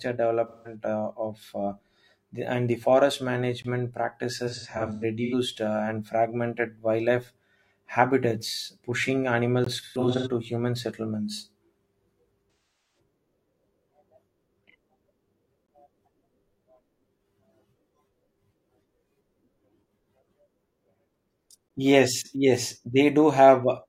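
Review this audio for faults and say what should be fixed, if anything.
AAC frame loss with concealment occurs four times. At 0.48–0.75 s, just before "uh of uh the", about 170 ms of signal is missing, which fits four lost frames; the decoder repeats the last good spectrum, giving a smeared, phasey patch. At 4.47–5.34 s, about 430 ms is lost in runs scattered over 0.85 s, the longest about a tenth of a second. At 9.81–10.27 s, just before "to human settlements", about 300 ms is lost over 0.43 s, the longest run around 150 ms. At 12.53–12.99 s, about 384 ms is lost. Adding forward error correction or retransmission on the transport would prevent the losses.

A gap between chunks appears as a 20 ms hole at 3.62–3.64 s, 9.64–9.66 s (right after "fragmented wildlife habitats pushing"), 15.66–15.68 s and 21.68–21.70 s. The 6 s spacing matches the chunk length, so each join inserts a hole, likely from encoder padding or a player starting each chunk late. 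Gapless playback that trims encoder delay and padding at each boundary would remove these holes.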